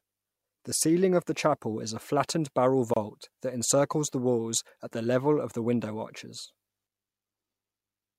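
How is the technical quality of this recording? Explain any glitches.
The recording has one audible technical glitch, a short dropout in the speech. Gap at a join of encoded pieces, from 2.94 to 2.96 s: two separately encoded segments were spliced without trimming encoder delay and end padding, leaving a gap of about 27 ms with smeared edges before the speech resumes exactly where it stopped.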